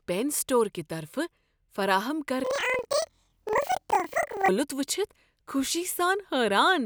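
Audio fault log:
2.44–4.51 s, planar audio read as interleaved: each block of about 46 ms, which fits a 2048-sample buffer, holds all of one channel's samples followed by all of the other's, but it is read as alternating left-right pairs. Each block's content therefore plays twice at double speed, once per channel, keeping the overall pace. The speech jumps an octave high, with a flutter at about 21.5 Hz from the block boundaries, until just before "وچھِتھ خوشی".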